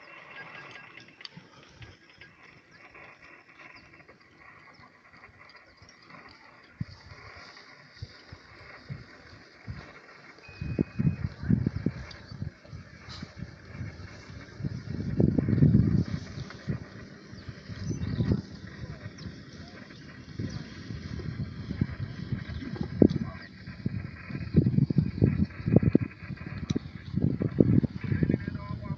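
At 2.46 s the audio suffers a skip ahead. About half a second of material is simply gone, and the sound on either side is butted together with no silence or fill in between. That missing gap is what separates it from a dropout or packet-loss concealment, where you would hear a hole, a buzz or a smeared stretch. The jump reads as the receiver's buffer overflowing and discarding queued audio, so playback leaps forward to catch up instead of pausing. Immediately after, from 2.55 to 4.16 s, a jitter buffer speed-up takes over. The sound runs at about 112% of normal speed, hurried but at the same pitch, as many small pitch-period slices are trimmed out until around a fifth of a second has been shed. The unchanged pitch distinguishes this from a sample-rate or clock mismatch, which would raise pitch along with tempo. Throughout, the call codec path is audible as a top end ending near 8 kHz, consistent with Opus at a moderate bitrate.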